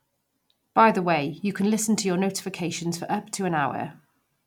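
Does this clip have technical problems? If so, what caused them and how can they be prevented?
No, the speech signal shows no audible technical faults anywhere in the clip, so there is nothing here that needs preventing.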